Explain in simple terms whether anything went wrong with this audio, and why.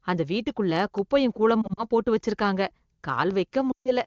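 Two kinds of fault are audible in this speech. The first is a block of digital silence: at 0.98 s, just after "அந்த வீட்டுக்குள்ள", and again at 3.31 s, the sound cuts out for under a millisecond and returns abruptly. It is heard as a small tick, likely because the audio was not delivered in time to fill the output.

The second is lost AMR speech frames. Between 1.62 and 1.83 s, after "அந்த வீட்டுக்குள்ள குப்பையும்" and before "போட்டு வச்சிருக்காங்க", about 80 ms of sound is missing in short patches. The decoder covers each patch by repeating the last good sound with falling level, so the speech briefly warbles and dips. From 3.71 to 3.92 s about 140 ms is lost, and the sound thins and fades before recovering. These gaps point to data lost over the radio link, with the wideband phone codec itself adding little audible damage.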